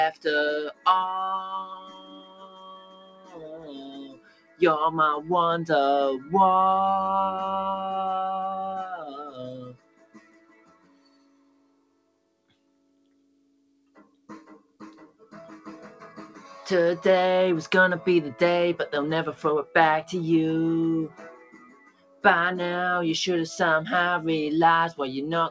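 Noise suppressor applied to music or sounds, throughout: a speech-tuned suppressor treats sustained tones and tails as noise, so the level swings by roughly 20 dB as onsets pass and held material sinks, giving a pumping, thinned character over a band that stops near 8 kHz.

Sound cut by the noise suppressor, at 0.68–0.86 s (about 15 dB down), 1.4–4.61 s (about 16 dB), 9.0–9.39 s (about 8 dB), 9.72–15.34 s (about 16 dB) and 21.13–22.24 s (about 15 dB): steady or decaying passages are judged noise and pulled well below their surroundings, so they fade or truncate while transients survive.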